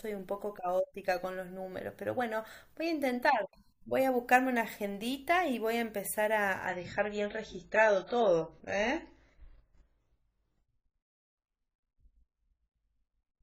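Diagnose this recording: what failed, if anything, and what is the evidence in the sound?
The network stage failed: the adaptive stream switched to a lower bitrate. At 6.67 s the speech abruptly loses its treble, with nothing above 7.6 kHz from there to the end, and coding artefacts become audible. There is no gap or dropout. The stream stays continuous while the quality steps down. When throughput fell, the player switched to a lower-bitrate rendition of the same stream, and the sound fits AAC at about 96 kbit/s dropping to about 16 kbit/s.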